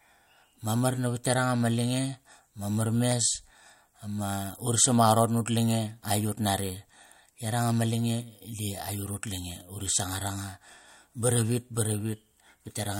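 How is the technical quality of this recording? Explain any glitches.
The recording has one recurring glitch. A likely clock drift buffer slip, with two devices about 100 ppm apart, drops or repeats a few samples every 1.74 s from 1.38 to 11.83 s, heard as regular clicks during the speech.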